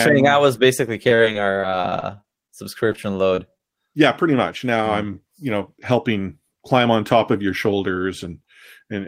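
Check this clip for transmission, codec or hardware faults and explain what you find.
The clip has two transmission faults, both from packet loss on the network path, concealed by the receiver.

Repeated packet loss (robotic sound) runs from 1.09 to 2.50 s, starting just after "saying I was basically". Packets went missing or arrived too late again and again, about a dozen times in that stretch, with the longest hole around 26 ms. Each time, the decoder stretched the previous sound to cover the hole, so roughly 15% of the stretch is synthetic fill. The speech turns choppy, with small pieces dropped out.

Short concealed packet loss follows at 2.92 to 2.96 s, 3.35 to 3.39 s and 3.57 to 3.61 s. Each time, a slice of audio about 20 ms long, which fits a single lost packet, failed to reach the decoder in time. The receiver extended the preceding sound over the hole and then crossfaded back into the real signal. 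Each event comes across as a brief smear or wobble.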